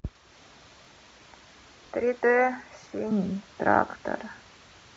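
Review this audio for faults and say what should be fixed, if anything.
Overlapping chunks: the audio was handled in 1.0 s blocks, each starting about 23 ms before the previous one ended, so that slice plays twice at every join. It is heard as a brief stutter at 0.85, 1.87, 2.89 and 3.92 s. Align each block to start exactly where the previous one ends, or crossfade and discard the overlap.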